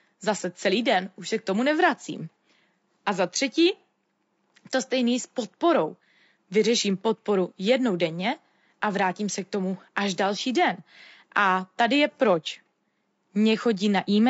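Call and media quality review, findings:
Rough, grainy voice across the whole clip, 0 to 14 s; hiss-like noise filling the gaps between harmonics, top band dull or synthetic. Damage plainly audible. Likely cause: low-delay AAC compression (AAC-ELD). Short frames resolve pitch harmonics coarsely and spend bits fast; the degradation level points to a low rate, around 32 kbps.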